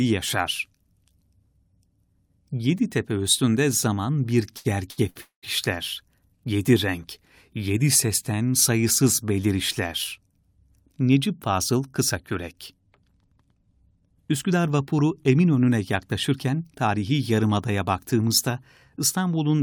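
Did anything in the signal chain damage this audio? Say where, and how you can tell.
Yes, at the network and jitter-buffer stage of a call.

Late packets emptied the jitter buffer three times just after "tepe üstünde zaman bir": short stalls from a late packet at 4.57–4.67, 4.91–5.00 and 5.10–5.17 s. Each time the receiver stretched the last sound for 74, 68 and 56 ms, so syllables hang on too long. Nothing is lost.

A call audio freeze follows at 5.21–5.45 s, likely from packets held up in transit. The buffer ran dry and the receiver filled 213 ms, the last sound fading into about 120 ms of silence before resuming at the same point. The effect is an inserted gap.

After "vapuru emin önüne", a jitter buffer speed-up runs from 16.31 to 16.96 s, ending at "yarımadaya baktığımızda". The overfilled buffer was trimmed by cutting out pitch-period slices, about 70 ms in total. The speech plays at 109 % speed at unchanged pitch and sounds hurried.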